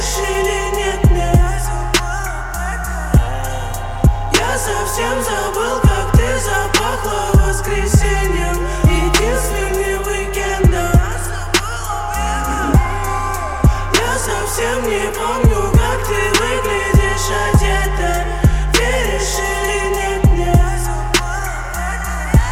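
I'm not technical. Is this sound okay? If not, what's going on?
No. Mains buzz throughout: interference from the 60 Hz power supply leaked into the recording, laying a fairly quiet but steady, raspy buzz under everything.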